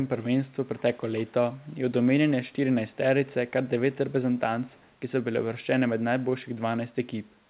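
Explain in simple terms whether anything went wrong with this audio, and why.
Echo leak: a faint copy of the speech returns about 181 ms late at 0.77–0.81 s, 1.68–1.72 s and 4.67–4.94 s, likely loudspeaker sound the other end's echo canceller missed.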